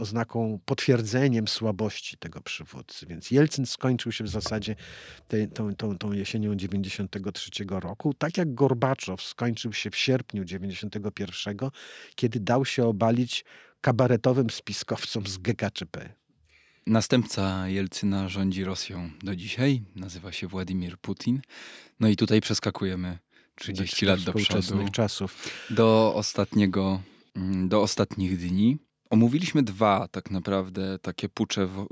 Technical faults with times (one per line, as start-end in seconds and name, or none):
none